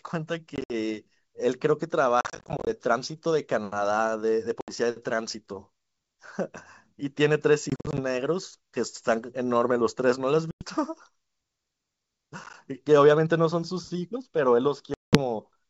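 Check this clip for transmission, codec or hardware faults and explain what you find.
Packet loss on an ADPCM call recurs seven times: 0.56–0.72, 2.21–2.78, 4.61–4.70, 7.70–8.00, 10.51–10.65, 12.44–12.54 and 14.94–15.18 s, losing 40 to 250 ms each. Dropped packets become hard-edged silences. The decoder's predictor and step size then drift from the sender's, so the speech resumes slightly distorted before settling. The G.722 wideband coding carrying the call shows little audible damage.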